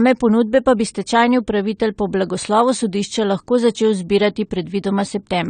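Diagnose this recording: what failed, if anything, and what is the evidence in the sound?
Codec stage: the speech stops dead at 9 kHz throughout and keeps low-bitrate smearing, which simple filtering wouldn't add. This is likely low-bitrate audio saved at a high bitrate.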